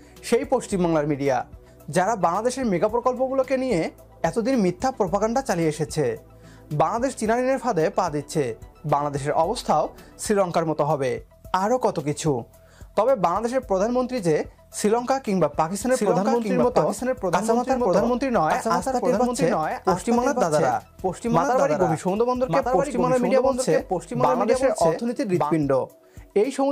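From about 15.91 s to 25.53 s there's a doubled audio track: a second, full-band copy of the sound comes in around a second behind the original, a few decibels quieter, with no decay or room colour on it, and it switches on and off abruptly at those edges. The cause is likely the same signal getting captured a second time through a slower path, or an edit that left two out-of-step copies stacked together.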